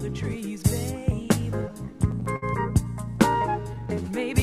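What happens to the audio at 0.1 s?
Nothing goes wrong at 0.1 s; the audio plays through that moment intact, with no dropout, click or distortion.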